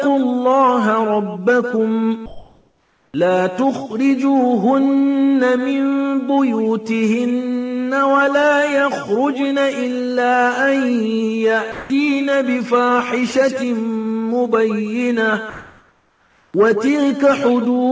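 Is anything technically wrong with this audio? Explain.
Yes. Between 2.26 and 3.14 s and again between 15.50 and 16.54 s, the real background is replaced by comfort noise. This likely happens because the sender's detector paused transmission and the receiver substituted steady synthetic hiss: about 4 dB quieter the first time, about 2 dB louder the second. On a spectrogram, those stretches are smooth and uniform, with no background detail.

At 3.12 s, the onset is clipped by the voice detector. About 20 ms of the sound's start is missing, so it begins abruptly. The waveform starts suddenly instead of ramping in.

From 11.72 to 11.90 s, a sound is dropped by the voice detector. Roughly 170 ms of sound becomes featureless noise. The waveform shows a flat, even band instead of the sound's envelope.

Throughout, the call codec leaves nothing above 8 kHz, and the spectrogram shows a hard ceiling there.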